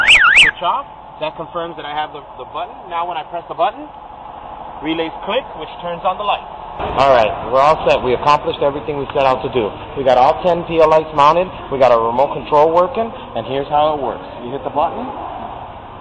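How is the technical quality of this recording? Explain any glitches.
Nothing in the recording registers as a technical fault, so there are no glitches to account for.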